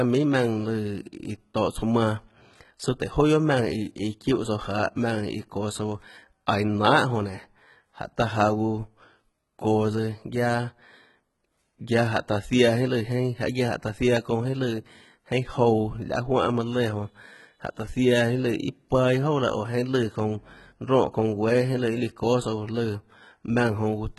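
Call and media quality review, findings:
Throughout: top end sounds rebuilt rather than real, with heavy codec damage and nothing above 11.8 kHz. Likely HE-AAC compression, and the thin, low-rate character fits something like v2 at 16 kbps. Mechanism: only the lower spectrum is coded, and the treble is filled in by copying lower bands upward under a coarse envelope. Harmonics don't line up across that crossover, so s sounds come out gritty, metallic or lispy.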